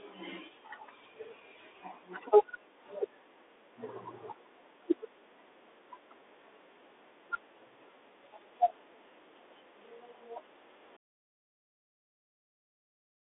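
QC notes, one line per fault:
Throughout: Bluetooth CVSD headset codec. Speech is confined to 300 Hz to 3.6 kHz, with nothing above 3.8 kHz. One-bit delta coding adds granular hiss, and its step size cannot keep up with sibilants, making them scratchy.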